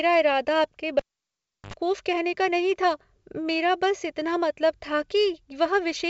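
Cable pulled and plugged in, from 0.99 to 1.74 s, just after "इरादा आपके": a live lead was yanked, giving a pop, about 0.7 s of near silence, then a 72 ms burst of 50 Hz mains buzz as the plug tip made contact, and a second pop before "कहने का नहीं था".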